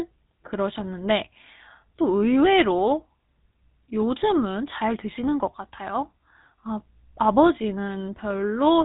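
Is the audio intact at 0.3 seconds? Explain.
No. At 0.3 seconds, as throughout the clip, the speech carries GSM full-rate codec damage. The codec models the vocal tract and drives it with a sparse, regular pulse excitation, giving a buzzy, gravelly roughness, with nothing above about 3.9 kHz, at a 13 kbps bitrate.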